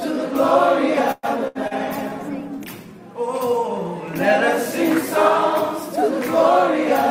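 Call audio freeze, 1.11 to 1.26 s: the sound stretches into a fading continuation of its last moment for about 117 ms, ending in roughly 30 ms of silence, then picks up exactly where it stopped. Nothing is lost, but everything after arrives 117 ms later. The likely cause is delayed packets leaving the jitter buffer empty.

Burst of packet loss, 1.48 to 1.58 s: around 80 ms of audio never arrived in time to play. The receiver covered about 73 ms of it by extending and steadily lowering the last sound, heard as a dying buzz or hiss, then resumed past the hole with that stretch missing.

Call bitrate drop, 1.54 to 3.11 s: the encoder's rate falls from 64 kbps to 20 kbps after the bandwidth estimate collapses, and stays at its lowest for about 1.5 s. Coarser coding makes the sound rough and watery, and the top end dulls until the rate climbs back.

Short concealed packet loss, 1.67 to 1.74 s: about 40 ms failed to reach the decoder, and roughly 34 ms was synthesised from the preceding sound before blending back into the real signal. 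The result is a brief smear or wobble inside the already degraded low-bitrate stretch.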